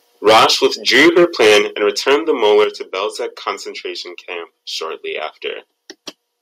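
From 0.26 to 1.59 s the speech carries a harsh, crackling edge on its loudest syllables. This is microphone overload, likely from the input volume being set too high, so the peaks run about 12 dB past the converter's ceiling and around a tenth of the samples have their tops flattened. At 0.28 s the level falls by about 2 dB in a single step, likely the call software turning the microphone volume down. It barely tames the distortion. A deeper microphone volume step-down of about 6 dB follows at 1.62 s, just after the crackling ends. A shorter, milder overload returns from 2.43 to 2.64 s, about 4 dB over with only a few percent of samples clipped. At 2.64 s another step drops the level by about 7 dB. The two faults sound different. Overload adds distortion to the waveform itself, mainly on the loudest peaks. A step-down adds no distortion. Voice and background both get quieter at the same instant, and the later two drops each come right after a distorted stretch.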